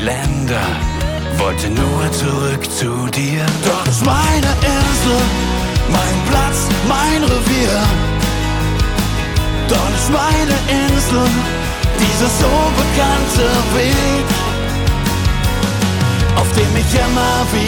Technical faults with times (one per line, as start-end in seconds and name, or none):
3.08-4.83 GSM signalling bursts
11.94-13.80 GSM phone buzz
13.80-14.65 GSM signalling bursts